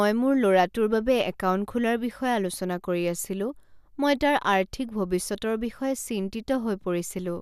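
Listening to the speech recording, nothing stood out as a technical fault at any point.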